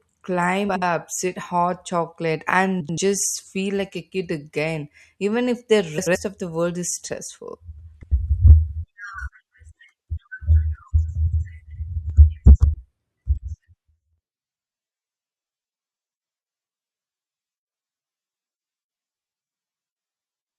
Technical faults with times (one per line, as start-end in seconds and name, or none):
0.69-0.82 frames out of order
2.80-2.98 frames out of order
5.97-6.16 frames out of order
7.94-8.12 frames out of order
11.27-11.40 frames out of order
12.46-12.65 frames out of order